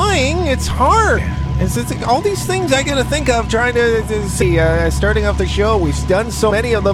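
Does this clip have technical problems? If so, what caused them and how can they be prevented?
Yes. Compressed frames are skipped at 1.17 s, 4.41 s and 6.50 s. At each point the decoder drops whole frames, either missing from the file or rejected as corrupt, so the audio jumps ahead by roughly 300 ms, 200 ms and 100 ms. These gaps point to runs of around fifteen, ten and five frames. To prevent this, check file integrity and use error-protected transport.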